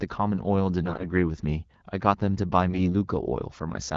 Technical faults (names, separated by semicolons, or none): AMR bit errors